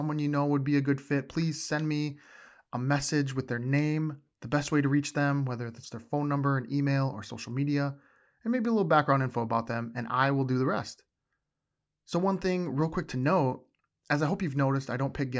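Listening through this speech recording, nothing stood out as a technical problem at any point.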